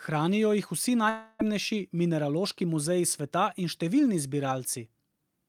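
From 1.09 to 1.42 s, just after "jih vsi", the stream most likely suffered a long network dropout: packets stopped arriving for about a third of a second, and roughly 300 ms of the speech never reached the receiver. The receiver padded the gap by extending the last sound it had, so nearly the whole stretch is a fading buzzy continuation rather than silence. The speech then resumes further on, with the lost portion simply gone.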